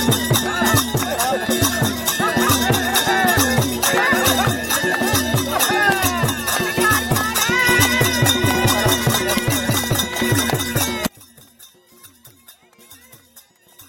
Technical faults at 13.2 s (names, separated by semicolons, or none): one channel inverted